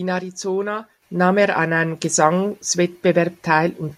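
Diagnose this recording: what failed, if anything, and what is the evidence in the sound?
At 1.02 s the speech and the room noise behind it jump up together by about 7 dB in a single step, with no fade, so the loudness change sits on the whole signal rather than on the talker alone. This is a microphone volume stepped up fault at the call processing stage: the call software judged the input too quiet and raised the microphone's input volume in one move, and every sample captured after that moment carries the extra gain.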